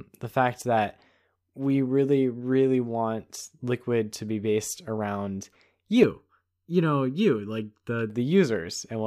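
From 6.03 to 8.10 s the speech turns hollow and phasey. This is channel delay (comb filtering): one channel lags by under a millisecond, notching near 700 Hz.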